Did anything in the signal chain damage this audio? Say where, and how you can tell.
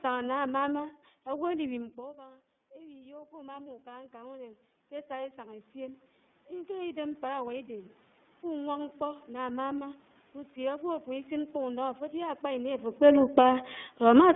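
Yes. At the codec stage, the iLBC codec runs throughout. The band stops near 150 Hz and 3.6 kHz, and speech sounds rough and synthetic, which fits independently coded 30 ms frames rather than simple filtering.

In call processing, automatic gain rising from 1.69 to 10.02 s slowly lifts voice and room noise together by about 16 dB. A talker moving, as near 2 s, would change only the voice.

Automatic gain falling from 13.01 to 14.31 s lowers everything by about 3 dB. The background sinks with the voice, unlike the talker's movement around 12.5 s.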